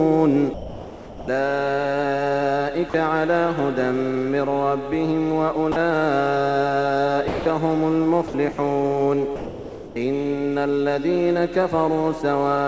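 The sound gives way to steady noise or near silence at 0.54–1.28, 2.90–2.94, 5.72–5.76, 7.28–7.46, 8.28–8.34, 8.52–8.58 and 9.36–9.96 s. It returns each time. The likely cause is sound dropped by the voice detector, which judged the sound to be background and stopped sending it. The receiver then filled the gaps with comfort noise.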